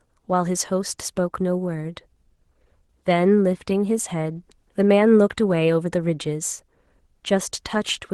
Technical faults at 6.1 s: none

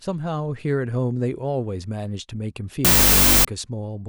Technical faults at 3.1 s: wrong sample width

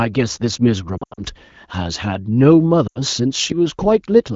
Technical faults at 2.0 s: none

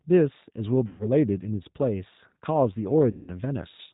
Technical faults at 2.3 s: G.729 codec

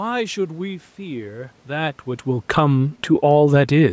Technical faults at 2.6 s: automatic gain falling

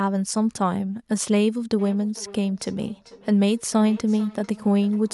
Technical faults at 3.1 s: feedback echo between two devices

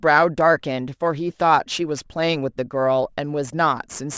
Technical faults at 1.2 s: aliasing

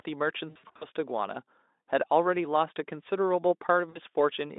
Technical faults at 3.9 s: VoIP packet loss concealed by the speech codec

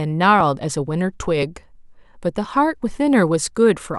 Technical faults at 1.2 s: periodic USB or driver dropouts

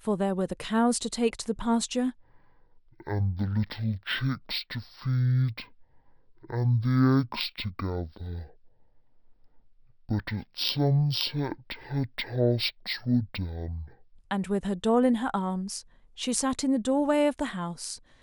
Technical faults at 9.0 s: stereo read as mono

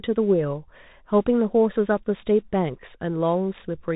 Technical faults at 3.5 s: Bluetooth CVSD headset codec

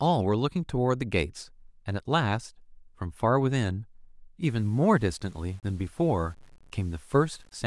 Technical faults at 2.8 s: none

